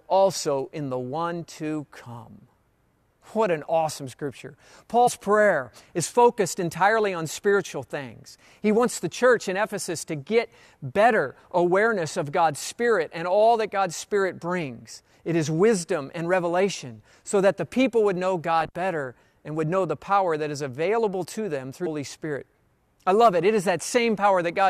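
Compressed frames are skipped at 5.06 to 5.08 s, after "an awesome scripture", and at 21.85 s, after "is available to them". The decoder drops whole frames, which fits frames of about 23 ms. The sound jumps ahead, roughly 50 ms, then 200 ms.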